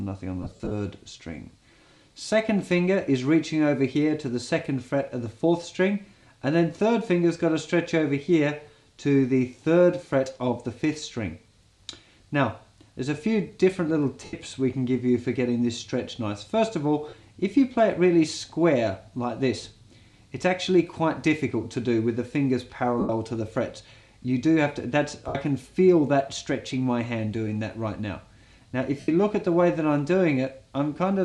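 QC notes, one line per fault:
0.42–0.71 s: lost LE Audio frames, about 172.5 ms of gaps scattered over 285 ms, the longest run around 50 ms. The LC3 decoder fills each gap by repeating the last spectrum with randomised signs, so tonal content smears into noise and fades as each run lengthens. The spacing fits 7.5 ms frames.
14.25–14.33, 17.09–17.13, 23.00–23.09, 25.28–25.35, 29.00–29.08 s: lost LE Audio frames, 37.5 to 90 ms each, heard as brief noisy smears that decay toward silence.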